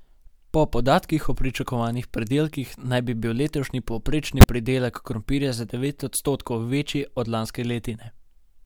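A corrupt frame decoded at 4.39 to 4.45 s: damaged bits in the compressed speech stream were still played, so misread gains and codes throw energy to wrong frequencies, giving a short glitch that fits roughly three consecutive frames.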